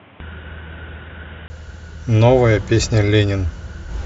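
From the start to 1.5 s the speech sounds dull and boxy, with nothing above 3.8 kHz and a noise floor about 30 dB down, likely an input switched to a poorer device. A 20 ms gap at 1.5 s marks the return, and the spectrogram's upper band fills in again.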